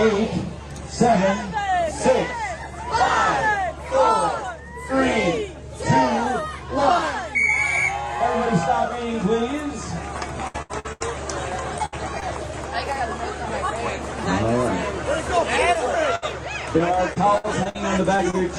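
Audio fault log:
10.47–11.02 s: repeated packet loss (robotic sound). Four gaps, the longest 78 ms, fill about 270 ms, half this stretch. The holes come too close together to recover, so the sound turns choppy with pieces missing rather than sounding like one isolated dropout.
11.78–11.81 s: short concealed packet loss. 20 ms is missing and a 12 ms patch continues the last sound, giving a brief smear or wobble rather than a held, fading fill.
11.85–11.94 s: burst of packet loss. 60 ms is missing and 68 ms is filled by holding the last sound while turning it down, so it becomes a fading buzz or hiss before the audio resumes with a piece missing. It lasts longer than the short smears.
12.20–12.23 s: short concealed packet loss. The same kind of hole as at 11.78 s, with 20 ms missing and a 12 ms fill heard as a quick smear.
16.15–16.24 s: burst of packet loss. 60 ms is missing and 65 ms is filled with a held, fading continuation, then the audio jumps ahead.
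16.78–17.77 s: repeated packet loss (robotic sound). Five gaps, the longest 59 ms, fill 164 ms, about a sixth of the span. The patches are sparser than at 10.47 s but still recur quickly enough to sound choppy.
18.17–18.21 s and 18.31–18.35 s: short concealed packet loss. Each drops 20 ms and patches it with a 20 ms and a 25 ms continuation, heard as two brief wobbles.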